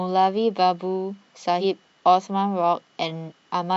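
Speech with compressed frames skipped twice, at 1.60–1.64 s and 3.28–3.32 s. The audio jumps ahead about 100 ms, then about 150 ms, consistent with two and three dropped 46.4 ms frames.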